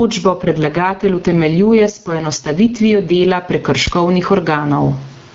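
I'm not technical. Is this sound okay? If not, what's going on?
No. Three separate problems can be heard in this speech recording.

All the way through, the level keeps breathing up and down, so soft and loud moments end up squeezed close together. This is gain pumping. The likely cause is that the microphone level was set much too high and an automatic level control keeps pulling it back down on every loud sound, then letting it creep up again.

From about 0.39 to 3.28 seconds, the voice turns rough, buzzy and somewhat robotic. It then clears up again without any gap in the sound. This is an AMR rate drop. The call was using the HD Voice phone codec, which sounds fairly clean at its normal setting. For those few seconds, the network made it squeeze the voice into much less data, so detail was lost until it stepped back up.

From 3.87 to 3.98 seconds there is a short, deep thump that dies away in a few hundredths of a second. 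This is a phantom power thump. A power supply to the microphone input was switched on or off while the line was live, and the sudden jump in voltage came through as a low knock.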